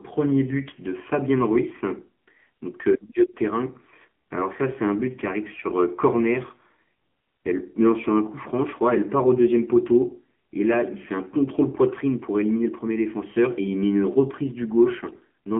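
Throughout, the speech sounds muffled, buzzy and plainly synthetic, confined to about 200 Hz to 3.4 kHz: AMR narrowband mobile codec compression, which fits a low rate near 7.4 kbps. From 15.04 to 15.16 s the speech turns briefly hoarse and gargly. These are AMR bit errors: about 3% of bits arrived flipped and misplaced the excitation pulses across several frames.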